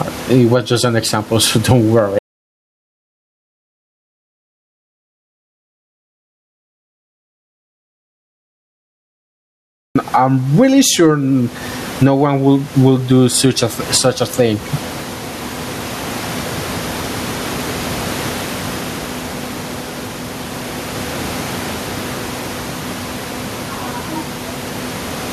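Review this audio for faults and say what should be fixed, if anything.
Gain pumping runs through the whole clip: the level breathes by around 15 dB, with the room noise otherwise sitting about 29 dB below the speech. The likely cause is input gain set far too high, with a fast limiter or compressor repeatedly clamping it down. To prevent it, lower the preamp gain and ease or bypass the fast limiter.

Audio dropout to silence from 2.19 s to 9.95 s: the speech stops abruptly, leaving roughly 7.8 s of silence with no room tone, then resumes mid-flow. This likely comes from the input being lost, through a disconnected device, a failed link or an accidental mute, while recording carried on writing silence. To prevent it, secure the connections and monitor input levels live during recording.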